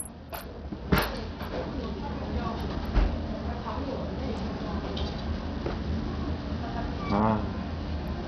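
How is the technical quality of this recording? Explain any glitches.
The quality is poor, with heavy coding damage across the whole recording. Throughout, the sound has the grit and unstable treble of Bluetooth SBC compression, likely from a starved bit pool fitting roughly 64 kbps. Few bits reach the upper sub-bands, so highs flicker or vanish and coarse quantisation leaves a gritty noise floor with aliasing. A spectrogram would show a ragged, blocky upper region with holes and bands switching on and off.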